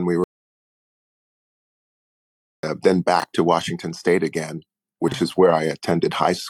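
The audio cuts to total silence from 0.24 s to 2.63 s, an audio dropout to silence of about 2.4 s, likely from the input being lost while the recorder kept writing silence. Unlike a quiet passage, this gap has no room tone, and the sound stops and resumes abruptly. Later come two brief chunks out of order. At 3.20 to 3.24 s a 20 ms chunk plays one position late, and at 5.08 to 5.14 s one plays two positions late. Unlike a dropout, nothing is missing. Each is a short jumbled moment.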